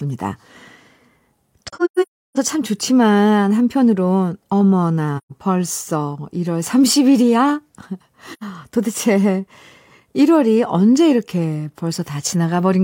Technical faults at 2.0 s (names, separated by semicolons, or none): AAC frame loss with muting